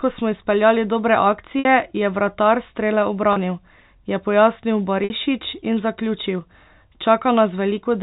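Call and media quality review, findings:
Packet loss with pitch repetition, 1.59 s, after "ko smo izpeljali dobre", before "je vratar": 60 ms gap concealed by looping the last pitch period, heard as a brief buzzy hold. Fits two lost packets. Spectrogram shows flat, frozen harmonics fading out.

3.33 s: 30 ms, one packet's worth. Shorter held buzz. Waveform shows identical repeated cycles.

5.04 s, after "je pojasnil": 60 ms, same concealment. Decaying envelope below the 4 kHz ceiling of the G.711 path.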